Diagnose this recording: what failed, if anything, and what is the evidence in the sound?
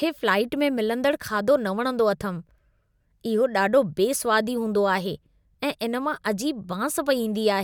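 Listening closely to the speech, nothing stood out that would point to a failure at any stage of the chain.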